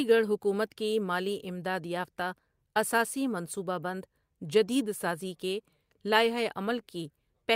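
Nothing stood out as a technical problem when listening to this speech recording.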